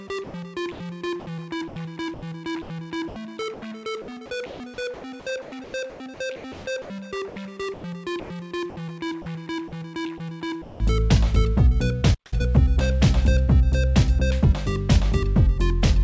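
From 0.24 to 0.80 s, the sender likely stopped transmitting during a pause and the receiver filled about 180 ms with comfort noise in place of the background. The real ambience gives way to a flat, featureless hiss with none of its former texture.

Between 1.68 and 3.62 s, and again from 4.46 to 8.30 s, the sender's voice detector likely switched transmission on and off repeatedly. This is sound chopped by the voice detector: about 400 ms and then about 1.1 s of quiet detail are replaced by synthetic noise. The sound becomes choppy.

At 10.62 to 10.80 s, the detector likely mistook a quiet passage for background and stopped sending. This is sound dropped by the voice detector: about 170 ms of sound is lost and replaced by steady noise until transmission resumes.

At 12.14 s, the player likely ran short of data and produced a playback stall. The output goes silent for about 175 ms before picking up again at 12.33 s.

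From 12.33 to 12.49 s, time-compressed catch-up clears the backlog at double speed by cutting and cross-fading small segments. The sound is rushed but keeps its normal pitch.

Throughout the clip, the G.722 call path limits the sound to nothing above 8 kHz.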